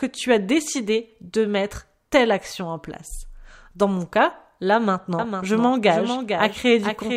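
From 5.19 s to the end, a doubled audio track: the speech is joined abruptly by a full-band copy of itself about half a second late and roughly 5 dB quieter, with no decay or room colour, so it sounds like a dry repeat rather than an echo. The likely cause is either a second capture through a slower path or an edit holding two copies out of step. A spectrogram shows every syllable's pattern repeated, fainter, half a second later; the waveform shows overlapping envelopes.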